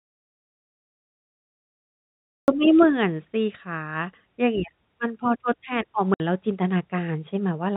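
From the first moment until 2.48 s the recording is silent, with no room tone, before the speech cuts in mid-flow. This is an audio dropout to silence, most likely a lost input or stray mute while the recorder kept writing silence.

At 6.14 s a 60 ms hole, ending at 6.2 s, chops the telephone-band speech, which stops at 4 kHz under G.711 coding. It is packet loss filled with silence. The gap's length fits six consecutive 10 ms packets going missing, and its edges are hard.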